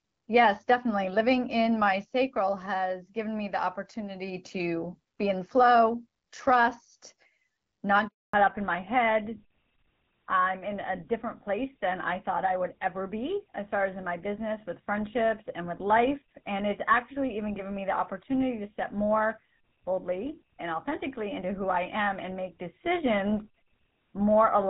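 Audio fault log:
8.07–8.33 s, handover gap: The speech fades out within a few tens of milliseconds and is followed by 260 ms of silence, as if the call were being passed between networks and no speech frames arrived until the new link came up. Whatever was said during that interval is gone. On the waveform this is a flat line after a short taper; on a spectrogram it is a blank vertical band across every frequency.
8.33 s to end, fallback to narrowband: Straight after the gap, all content above 4 kHz disappears and stays missing, so the voice turns duller and rougher than in the first 8 seconds. The first part sounds like HD Voice at a mid rate, probably around 12.65 kbit/s, with only light coding roughness. The change suggests a drop to an older narrowband codec such as GSM full rate. On a spectrogram the energy ends abruptly at a hard ceiling near 4 kHz.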